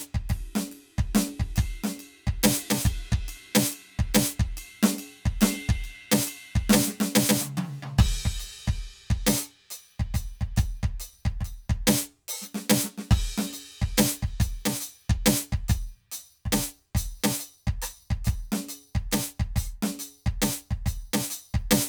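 Throughout the music, channel delay (comb filtering) is present: one channel lags the other by around 10 ms, so the mono sum cancels at notches from about 50 Hz, spaced roughly 100 Hz apart. It sounds hollow and phasey; a spectrogram shows fixed, evenly spaced dark horizontal stripes.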